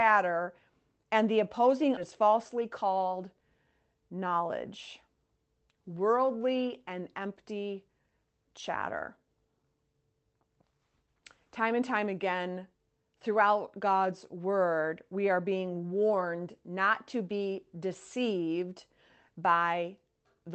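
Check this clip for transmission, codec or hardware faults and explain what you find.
Two transmission faults are audible, both in the call path.

Skip ahead, at 1.97 to 1.99 s, just after "and the opposing": about a second of speech was discarded and playback jumps straight on with no gap. The waveform shows an abrupt splice, and spectrogram formants break sharply with no silence between.

Jitter buffer speed-up, from 2.11 to 4.26 s: after a backlog built up in the buffer, short pitch-period pieces were cut out repeatedly, about a fifth of a second in all, so the speech runs at 110% with unchanged pitch. Syllables look compressed on the waveform, while spectrogram harmonic spacing stays the same.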